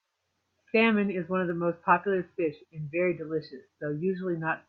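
A speech clip with a single sharp click at 1.50 s, heard as a thin vertical line across the spectrum. It is likely dropped samples, only a couple lost, about a twentieth of a millisecond. Unlike a dropout, no sound goes missing; the waveform simply jumps.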